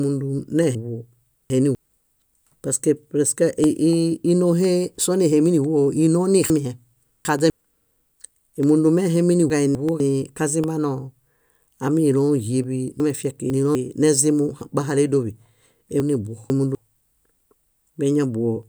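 Regular ticks sound once a second from 0.63 to 18.63 s in this speech recording, each a silent gap well under a millisecond, the mark of periodic USB or driver dropouts. Garbled jumbles at 0.75–1.75, 6.5–7.5, 9.5–10.0, 13.0–13.75 and 16.0–16.75 s are chunks out of order, where a 250 ms chunk plays one to three chunks late.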